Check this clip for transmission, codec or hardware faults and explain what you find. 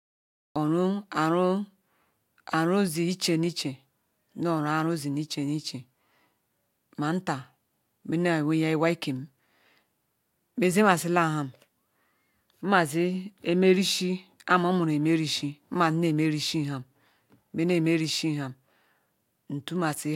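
One fault is present, a cut-off start. Capture or transmission began late, so the opening of the speech was never recorded. The clip holds digital silence from 0.0 to 0.56 s, then jumps straight into speech already in progress at 0.56 s. Because the first sound was lost rather than faded in, there is no natural attack at the onset: it arrives abruptly at full level, as if the speaker were interrupted mid-syllable.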